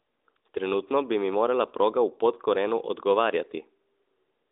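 Nothing stood out on listening to this speech recording.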